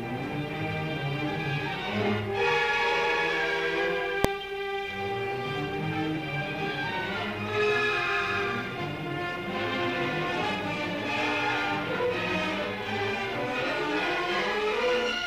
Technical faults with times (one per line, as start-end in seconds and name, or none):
4.24 invalid numbers at full scale